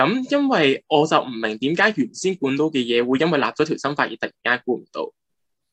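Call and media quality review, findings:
No audible faults found across the clip; nothing to log.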